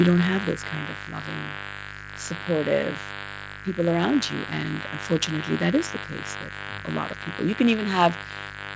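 A mains buzz runs through the whole clip. Switching spikes ride on the 50 Hz supply, twice per cycle. Their harmonics climb into the kilohertz range. The result is a steady, raspy buzz, loud at roughly 10 dB below the speech.

From 0.05 to 1.08 s, automatic gain falls. The gain control judged the opening too loud, or its background too strong for the gain it started with. It pulled its gain down gradually, by about 5 dB. The speech starts loud, then sinks. The buzz and background sink with it.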